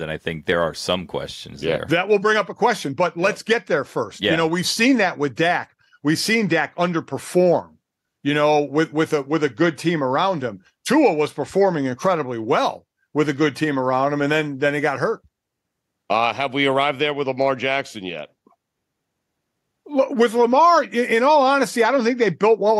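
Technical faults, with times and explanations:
No technical faults heard.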